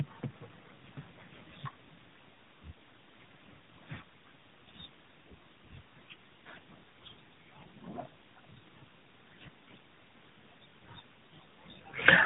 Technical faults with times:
0.00-12.26 tandem speech coding

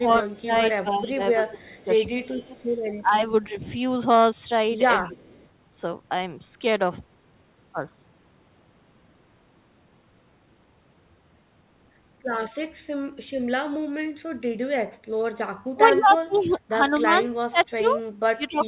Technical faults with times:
0.00-3.57 speech suppressed in double talk
0.33-0.39 echo leak
1.77-1.84 echo leak
2.58-2.64 echo leak
5.05-5.36 speech suppressed in double talk
5.11-5.47 echo leak
15.73-18.68 speech suppressed in double talk

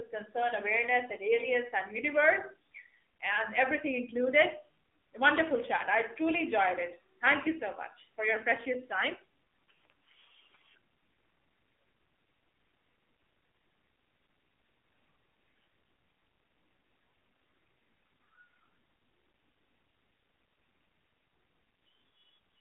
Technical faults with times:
0.00-22.60 AMR narrowband mobile codec

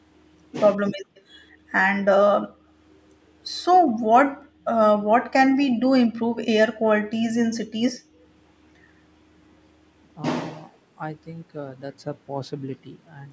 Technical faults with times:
0.76-0.94 speech suppressed in double talk
1.15-1.22 echo leak
1.54-1.64 background gated by the echo canceller
2.43-2.66 background gated by the echo canceller
3.85-4.06 background gated by the echo canceller
4.32-4.65 background gated by the echo canceller
7.49-7.60 speech suppressed in double talk
7.97-8.21 background gated by the echo canceller

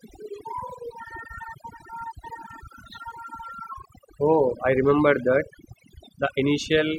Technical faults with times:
0.00-6.98 overdone noise removal

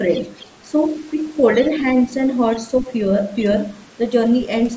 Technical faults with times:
0.13-0.55 other side's voice leaking through
1.53-1.68 other side's voice leaking through
2.51-2.58 other side's voice leaking through
2.80-2.86 speech suppressed in double talk
3.75-3.92 other side's voice leaking through

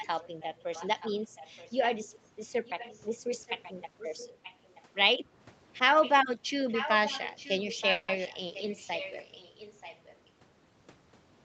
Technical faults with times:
0.00-2.08 echo leak
2.42-3.02 echo leak
3.46-3.72 echo leak
3.98-4.82 echo leak
6.02-6.12 echo leak
6.68-10.29 echo leak
7.91-8.10 call audio freeze
8.24-8.27 skip ahead
8.62-9.01 jitter buffer slow-down

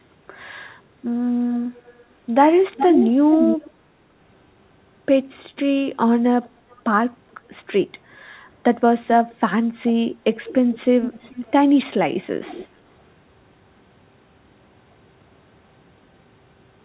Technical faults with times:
1.87-2.05 echo leak
2.74-3.71 echo leak
6.44-6.82 echo leak
9.30-9.35 echo leak
10.34-11.51 echo leak
12.45-12.67 echo leak

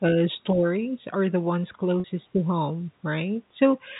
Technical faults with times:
0.53-0.64 speech suppressed in double talk
2.00-2.04 packet loss with pitch repetition
2.29-2.48 speech suppressed in double talk
3.88-4.00 speech suppressed in double talk

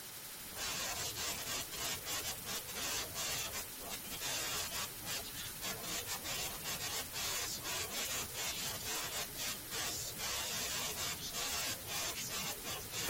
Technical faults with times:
2.90 damaged data in a compressed stream
9.34 damaged data in a compressed stream

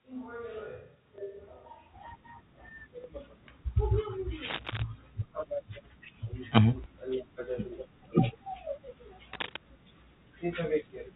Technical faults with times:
0.00-1.93 switch to a distant microphone
1.16-1.18 packet loss with last packet repeated
3.02-3.04 packet loss with last packet repeated
4.44-4.82 cable scratch noise
6.84-6.86 packet loss with last packet repeated
9.33-9.56 cable scratch noise

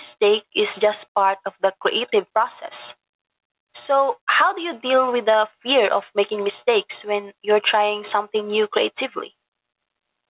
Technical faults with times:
0.00-10.30 gain pumping

